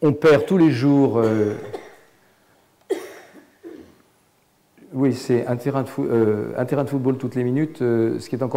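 Hard clipping first hits from 0.04 to 1.42 s, overdriven by about 12 dB, so peaks are sheared flat and every loud moment turns to harsh fuzz. Lighter bursts follow at 5.05–5.78 s (about 1 dB, crackle on peaks), 6.14–7.10 s (about 3 dB) and a brief burst at 8.55 s (about 4 dB). The waveform shows squared-off tops; the spectrogram shows harmonic smear reaching high into the spectrum during each burst.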